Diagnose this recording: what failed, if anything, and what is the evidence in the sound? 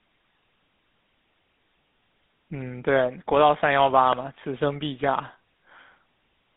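The codec stage failed: the speech has passed through the GSM full-rate codec, and the damage is plainly audible for the whole clip. The voice carries a buzzy, gravelly roughness because the codec rebuilds it from a vocal-tract model driven by a coarse, regularly spaced pulse excitation. That rate of damage fits a 13 kbps coder. On a spectrogram, energy is confined to a telephone band of roughly 150 Hz to 3.7 kHz, with nothing at all above 3.8 kHz, and the harmonics look smeared rather than crisp.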